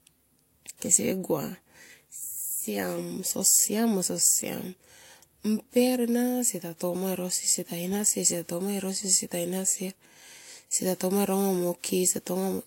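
Throughout the clip, the speech carries two layers of compression damage at once. Nothing is heard above 16.3 kHz. The top end has a synthetic, swirly sheen. Over that sits a second grit of its own. This is likely transcoding between lossy codecs. The sound fits HE-AAC at 32 kbit/s re-encoded as WMA at 96 kbit/s. The second pass spent its bits keeping the first pass's flaws.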